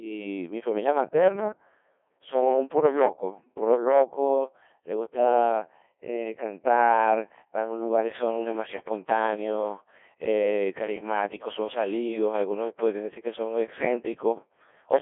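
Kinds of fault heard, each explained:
Codec 2 vocoder: the speech is rebuilt from pitch, voicing, energy and a coarse spectral envelope at about 1.2 kbit/s, so it sounds heavily robotic and buzzy. A spectrogram shows nothing above 3.5 kHz and sine-built harmonics, and the resynthesised waveform doesn't keep the original's shape.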